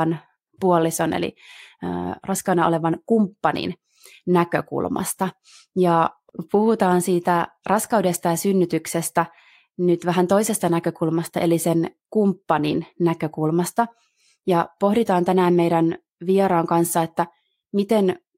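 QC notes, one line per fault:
Nothing to flag on this speech recording, as no problems turned up anywhere on a full listen.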